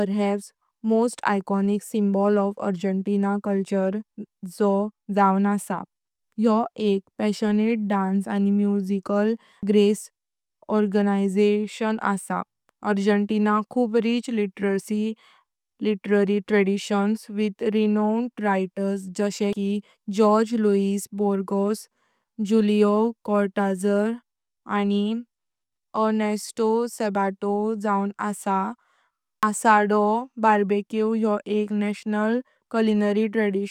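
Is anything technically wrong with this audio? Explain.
Yes. The speech skips abruptly at 9.63, 19.53 and 29.43 s, each time losing about a tenth of a second with the two sides butted together. This is likely audio missing between chunks: a recorder handling 10-second blocks drops a sliver at each changeover.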